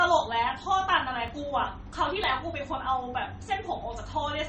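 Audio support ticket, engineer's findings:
Low-bitrate audio saved at a high bitrate, entire clip. Smeared MP3-type artefacts fit a low-bitrate MP3 near 32 kbit/s re-encoded higher. The result is a bigger file with the lost detail never restored.

Dropped samples at 1.28, 2.24 and 3.46 s. Each is a single sharp click where the waveform jumps ahead, likely from a fraction of a millisecond missing from the stream.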